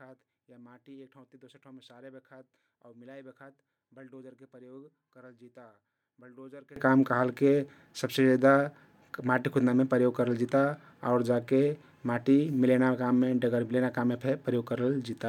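From the start to 6.76 s, the speech collapses when the stereo pair is folded to mono. Its level drops by about 27 dB, and what remains is a faint copy, with the centred voice largely gone. The likely cause is one channel inverted: a polarity flip on one side makes the shared centre content cancel on summing, leaving only the small difference between channels.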